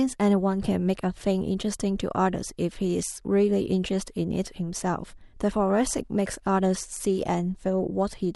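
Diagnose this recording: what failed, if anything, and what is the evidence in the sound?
Nothing failed: the speech shows no audible evidence of a fault at any stage, from wiring and conversion through processing, network, storage and playback.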